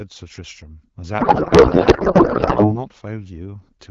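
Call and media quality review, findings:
Speech collapses into garbled noise and warble, barely tracking the talker, 1.19 to 2.80 s. Codec payload misread on the AMR wideband path: decoder parsing frame fields at wrong bit offsets, consistent with octet-aligned packing read as bandwidth-efficient. Clear 12.65 kbit/s AMR-WB on either side.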